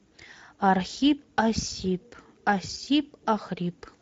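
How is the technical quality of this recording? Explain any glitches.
The speech sounds hoarse and grainy from start to finish, with nothing above 7.8 kHz. These are plainly audible Speex codec artefacts throughout: the codec models speech from too little excitation detail, which fits a wideband mode around 17 kbps, so natural voicing turns rough, and the top band above about 4 kHz sounds like shaped noise rather than real detail.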